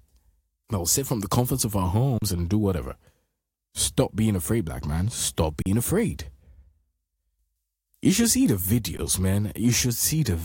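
At 2.18 to 2.22 s, after "the comforts of our" and before "and do whatever", the speech freezes for about 36 ms: an underrun with held sample, where the converter ran out of data and held its last value. The same happens at 5.62 to 5.66 s for 40 ms, and briefly at 8.97 s after "should see the". Each gap starts without a click, unlike a dropout to silence, and live audio was lost meanwhile, about 40 ms in the first two gaps.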